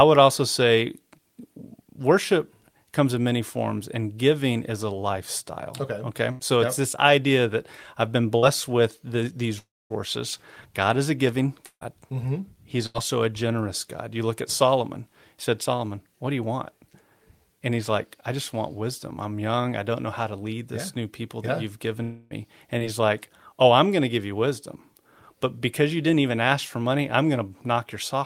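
Bursts of packet loss hit the speech at 6.31 s (about 80 ms missing) and 8.37 s (about 60 ms). Each time the receiver stretches the last sound into a short held buzz or hiss that fades before the speech jumps ahead.

From 9.58 to 9.92 s and again from 22.02 to 22.33 s there are long dropouts, likely from the network going quiet for around 0.3 s each time. In the first, the concealment fades and leaves roughly 230 ms of silence. In the second, the fading fill runs the whole way, with no clean gap.

More bursts of packet loss follow at 11.66 s and 12.86 s. The first is about 160 ms, long enough that the fill dies into about 70 ms of silence. The second is about 80 ms of fading fill.

At 22.79 to 22.82 s, a short concealed packet loss leaves a tiny smear where roughly 20 ms was patched and blended back.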